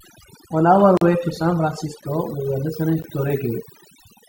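Overdone noise removal runs throughout the speech: an over-aggressive reducer mutes bands near its noise estimate, leaving near-silent, twinkling background. Gaps between stream segments come at 0.97 to 1.01 s before "way to", 2.01 s before "we were", and 3.02 s after "we were", hard-edged silences of about 40, 10 and 16 ms spaced roughly a second apart, which fits one-second segments whose timestamps leave holes the player fills with silence.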